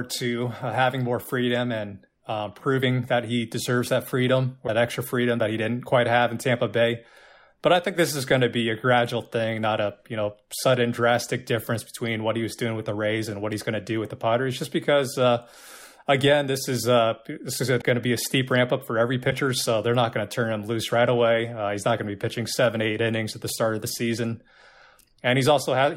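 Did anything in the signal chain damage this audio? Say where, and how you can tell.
Yes, at the codec or storage stage. There are three brief glitches, each about 30 ms long: at 4.66–4.69 s between "he deserves that freedom" and "extra freedom that he", at 17.80–17.83 s between "uh this is going" and "to be a steep", and at 19.29–19.32 s between "ramp up for every" and "so they're not going". Each is roughly one 26 ms MP3 frame long, so a broken MP3 bit reservoir is the likely cause. Frames were lost, and the following frame reached back for borrowed bits that were no longer there. A network dropout with concealment would smear or repeat the sound. Here the speech jumps forward at frame-sized steps.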